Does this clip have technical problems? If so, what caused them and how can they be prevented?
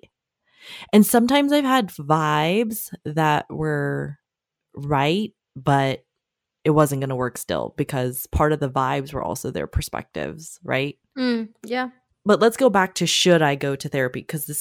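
Yes. From 0.96 to 1.37 s the speech drove one stage about 2 dB past the largest level it could pass, so hard clipping sliced the waveform peaks flat. Those squared-off tops add harmonics high in the spectrum, heard as a brief crackle on the loudest moments. Setting gain so peaks stay several decibels below full scale at every stage would prevent it.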